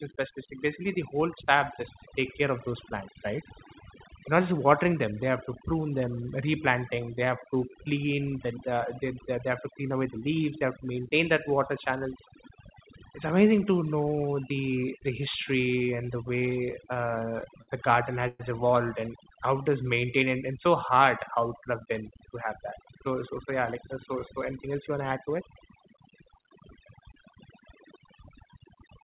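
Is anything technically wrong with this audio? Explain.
Yes, several things go wrong in this speech recording.

Overdone noise removal runs throughout. A noise reduction stage set too aggressively drives individual frequency bands down or out whenever they sit near its noise estimate, taking quiet parts of the voice with them. The background drops and breaks up into twinkling specks.

Repeated stalls (stutter) occur from 15.85 to 17.70 s, ending just before "the garden". Packets kept arriving late, so the jitter buffer emptied 17 times, and each time the receiver stretched out the last sound until data came back. That filled about 210 ms, roughly 11% of the span, with the longest wait 61 ms. Nothing is lost, but the speech drags and stutters.

A call audio freeze follows at 18.28 to 18.41 s, between "the garden" and "evolved and". The jitter buffer likely ran dry because packets were held up in transit. 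The receiver carried the last sound on as a fading fill for 114 ms, ending in a brief moment of silence, then resumed where it left off, adding a gap of that length while dropping nothing.

A jitter buffer slow-down runs from 19.40 to 20.25 s, between "evolved and" and "and and so". To rebuild its reserve, the receiver repeated single pitch periods and bits of pause again and again, adding 72 ms. The speech plays at 92% speed at unchanged pitch, with drawn-out sounds.

A jitter buffer speed-up covers 22.15 to 27.94 s. Holding more audio than it aims for, the receiver cut out short pieces of one or a few pitch periods repeatedly, removing around a fifth of a second in total. The speech runs at 103% speed at the same pitch.

The call path itself, G.711 mu-law at 64 kbps, is heard as band-limited audio with nothing above 4 kHz, along with its usual coding noise.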